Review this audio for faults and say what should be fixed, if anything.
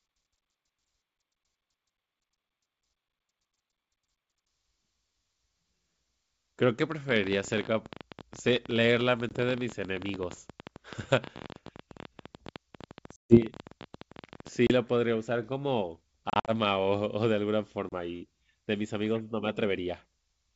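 A train of clicks runs from 6.92 to 14.49 s, about 16 per second at an irregular pace, roughly 150 in all, with peaks about 10 dB above the speech. The clicks all have much the same shape and continue through pauses, which separates them from the decoder clicks described below. Those appear only where audio drops out. The likely source is interference from nearby equipment or a faulty connection or power supply. Moving equipment apart and checking the connections and power supply should prevent it.

Packet loss on an ADPCM call leaves hard-edged silent holes at 9.29–9.34 s (20 ms lost), 13.16–13.42 s (140 ms), 14.67–14.72 s (30 ms), 16.30–16.51 s (120 ms scattered over about 180 ms, longest gap 50 ms) and 17.89–17.92 s (30 ms). Speech comes back slightly distorted. That happens because the decoder's predictor and step size fell out of step with the sender's, and they take some tens of milliseconds to settle. 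The actual silence, followed by that recovery, distinguishes this from the steady click train. The G.722 coding itself sounds clear. A jitter buffer with packet-loss concealment, plus a more stable network path, should prevent it.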